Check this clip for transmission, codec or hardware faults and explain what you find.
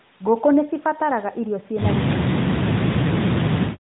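Two faults turn up here, both pointing at a hands-free echo canceller, heard through a narrowband mobile path that cuts everything above about 3.8 kHz.

From 2.09 to 2.15 s there's a short echo leak: a brief scrap of the speech comes back roughly 342 ms late, only about 10 dB under the live speech. The likely cause is a loudspeaker-to-microphone echo on one side that the canceller didn't fully subtract, so the residue was sent back.

From 2.17 to 3.43 s you get speech suppressed in double talk. The talker's level keeps dipping, at worst by around 40 dB, for about a second in total. It's likely the canceller couldn't separate the local talker from the returning echo while both sides spoke, so it ducked both.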